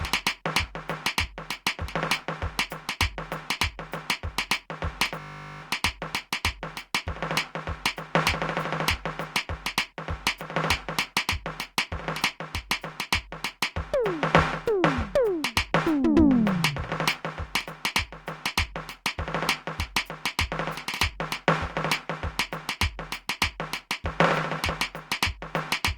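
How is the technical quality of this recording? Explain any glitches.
The music has one clear glitch. From 5.2 to 5.62 s a system hang loop replays a single 20 ms slice about twenty times, producing a steady 50 Hz buzz. Unlike a dropout there is no gap, and unlike a slower stutter the repeats fuse into a tone. Almost no music is lost.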